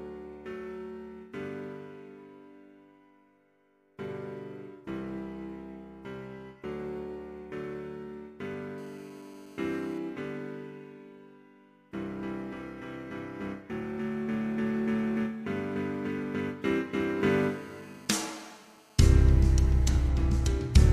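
A nearby 2G handset on a call is pulsing its transmitter 217 times a second, and the audio circuitry rectifies those bursts. The result is GSM phone buzz: a hard, raspy 217 Hz drone rich in harmonics, steady and about 29 dB below the sound, from 8.78 to 9.98 s and again from 17.29 to 20.10 s.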